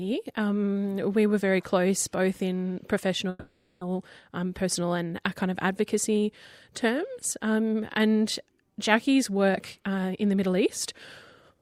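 At 3.29 s the sound hangs as a fading buzz for about half a second until 3.83 s, a call audio freeze, likely packets stalling and the jitter buffer running dry. From 9.49 to 10.66 s there's a jitter buffer speed-up: the audio plays at 125% with unchanged pitch as the receiver trims around 300 ms to catch up.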